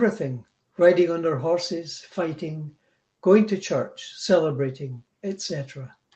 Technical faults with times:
none

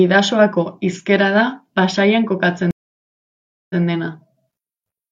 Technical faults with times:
2.71-3.83 stream reconnect

